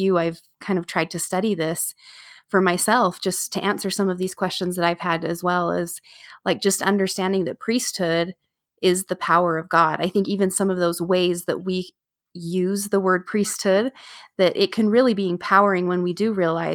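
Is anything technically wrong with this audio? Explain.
No, the signal shows no technical faults that can be heard at any point in the recording.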